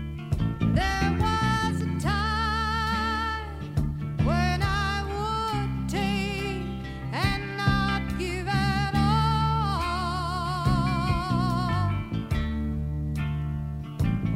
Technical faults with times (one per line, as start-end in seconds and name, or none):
none